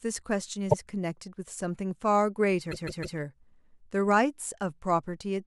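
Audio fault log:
0.69–0.75 s, repeated frames: a 52 ms stretch of the sound plays a second time, which fits two compressed frames of about 26 ms each being decoded twice. It is heard as a brief hiccup and adds 52 ms to the clip. On the waveform the same short shape appears twice back to back.
2.71–3.18 s, repeated frames: a longer block of about 157 ms, which points to roughly six frames, is played three extra times. This gives a mechanical, looping stutter and adds 470 ms. On a spectrogram, identical slices repeat side by side.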